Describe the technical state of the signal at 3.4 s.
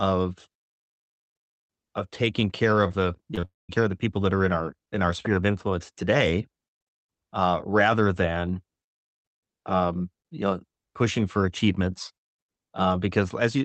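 Right after "taking care of the", the speech smears and wobbles in three quick bursts, at 3.31 to 3.35 s, 3.35 to 3.39 s and 3.41 to 3.45 s. This is short concealed packet loss. Each time, about 20 ms of the call failed to reach the decoder in time, and the receiver patched the gap by extending the preceding sound before blending back into the real signal, leaving a brief slurred texture.

From 3.45 s the sound briefly continues as a fading buzz, then drops to near silence for most of the span. It resumes at 3.71 s with "care of the people". This is a long network dropout, likely a stall in which about 240 ms of audio never arrived. Concealment could only stretch the last sound briefly before it faded out, and the missing stretch is simply gone rather than delayed.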